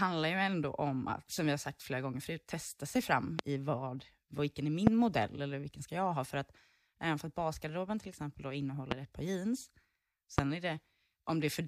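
A loud pop hits the speech at 3.39–3.42 s, after "förut testa sig fram". Another follows at 4.87–4.90 s, before "modell eller vilken ska". A third comes at 8.91–8.94 s, between "basgarderoben till exempel då" and "ett par jeans". The last lands at 10.38–10.41 s. Each is a single sharp crack, roughly 20 to 25 dB above the speech. The speech continues underneath. The likely cause is a brief voltage spike entering the signal path.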